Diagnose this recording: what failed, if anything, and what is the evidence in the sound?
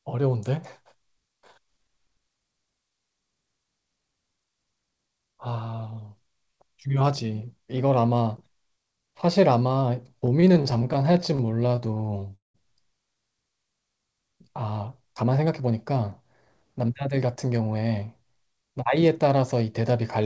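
Repeated stalls (stutter) at the network and jitter-buffer stage, from 10.26 to 12.56 s. The speech drags through 29 held gaps, about 0.52 s of stretched sound, the longest 192 ms, nearly a quarter of that span. On a spectrogram, harmonics extend as flat smeared bands, with the longest fading in the waveform envelope. This happens when packets arrive late and the buffer empties, so the receiver repeats the last sound instead of leaving silence.

Jitter buffer speed-up at 15.07 to 16.09 s (109%) and 16.81 to 17.82 s (110%), each cutting about a tenth of a second. The speech sounds hurried at unchanged pitch. The waveform shows slightly compressed syllables, and the spectrogram shows normal harmonic spacing over shortened events. The buffer trims pitch periods to shed excess delay. Throughout, nothing appears above 8 kHz, which fits a wideband call codec.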